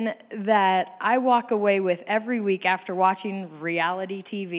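Nothing in this speech recording stood out as a technical problem on listening.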